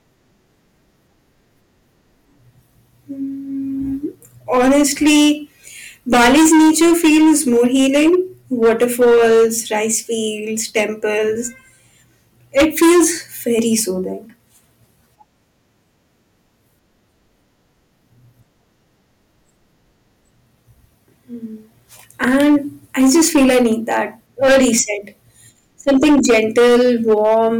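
Throughout the speech, a stage in the chain is driven about 15 dB past what it can pass, so every peak is sliced flat, affecting a small but steady share of the samples. This hard clipping adds high harmonics, giving the louder syllables a harsh, gritty fuzz.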